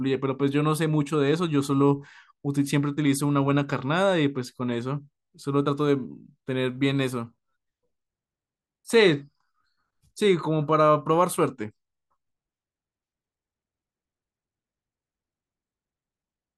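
Nothing stood out on listening to this recording; no faults could be heard at any point.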